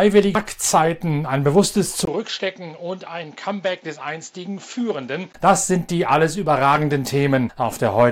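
At 0.35 s there is a brief glitch, the mark of damaged data in a compressed stream. Some bytes in the encoded file were corrupted, so the decoder misread the frame there, lost sync and skipped ahead to the next valid frame header. On a spectrogram this appears as a narrow vertical smear of broadband garbage. In the waveform it shows as a small, abrupt discontinuity.

From 2.05 s to 5.34 s the sound suddenly turns duller and boxier, then clears again, which points to the input likely switching to a poorer device. A gap of about 20 ms of silence marks the change. The level drops by roughly 10 dB, and a new background noise sits well below the signal. The spectrogram shows a hard ceiling with nothing above 7.6 kHz across that span. The waveform shows a short flat gap followed by a visibly smaller envelope.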